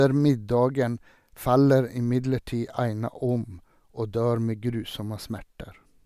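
No technical faults are audible anywhere in the speech recording.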